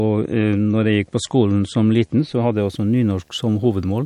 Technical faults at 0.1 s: video or display buzz; adaptive stream starting at a low bitrate

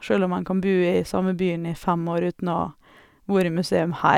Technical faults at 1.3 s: none

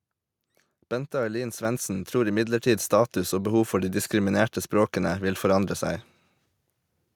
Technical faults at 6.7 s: none

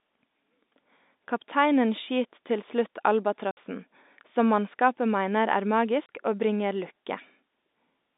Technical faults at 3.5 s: packet loss filled with silence

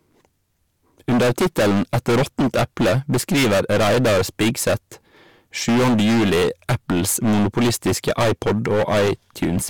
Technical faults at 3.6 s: hard clipping

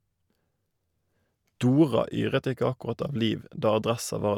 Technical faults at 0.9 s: none

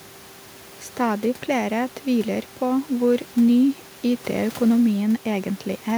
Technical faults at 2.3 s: none

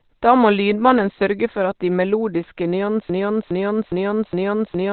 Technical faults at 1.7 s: Opus compression

